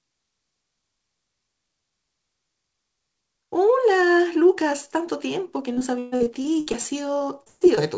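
From 5.74 s to 7.79 s, packets arrive late or not at all, again and again: repeated packet loss (robotic sound). Over a dozen holes open in that two-second stretch, the longest about 134 ms, and the receiver bridges each one by stretching out the last good sound, so roughly a quarter of the span is patched rather than real. The speech turns choppy, with pieces dropping out, all within the 8 kHz band that the G.722 call path carries.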